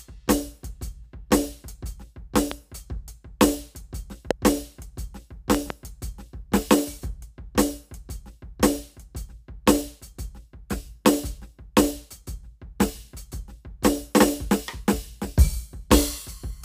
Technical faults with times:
2.51-2.54 loud pop
4.31-4.33 loud pop
5.55-5.72 loud pop

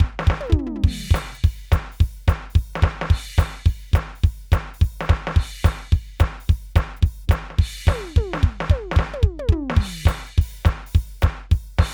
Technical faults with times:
none

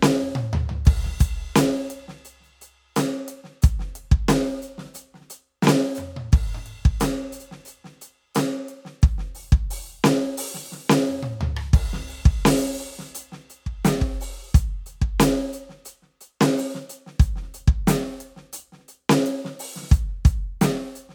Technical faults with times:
none

